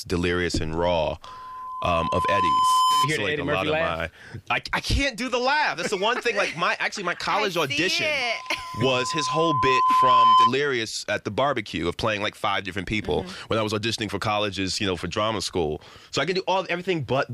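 Loudspeaker feedback squeal appears twice, from 1.25 to 3.11 s and from 8.19 to 10.54 s. Both times a microphone picks up its own loudspeaker, and the loop gain at 1 kHz exceeds one, so a pure tone swells over roughly one and a half and then two seconds. It ends somewhat above, then clearly above, the surrounding sound. A spectrogram shows a bright horizontal line at 1 kHz, and the waveform shows a growing envelope.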